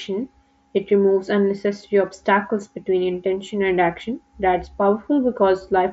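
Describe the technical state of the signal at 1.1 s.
At 1.1 s the speech comes through intact, carried over a Bluetooth mSBC headset link, with no fault at that moment.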